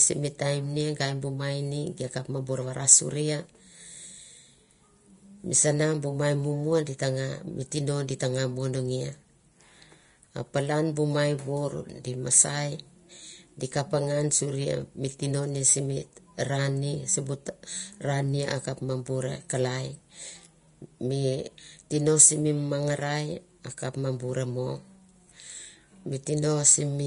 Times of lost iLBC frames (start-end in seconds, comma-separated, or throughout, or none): none